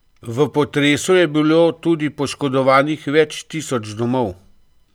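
No technical faults can be heard anywhere in the recording: the speech signal stays continuous and stable throughout, with no interruptions, level jumps or added disturbances.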